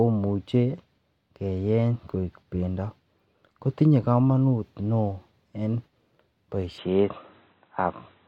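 At 6.78 s the speech abruptly turns dull and boxy and stays that way to the end, with no gap at the changeover. This is most likely an input switched to a poorer device mid-recording. The new path passes nothing above 4 kHz, so sibilance and air vanish. The level also shifts modestly, and a faint new noise floor sits far beneath the speech. On a spectrogram, energy above 4 kHz cuts off at a hard horizontal edge. The waveform shows a small step in amplitude.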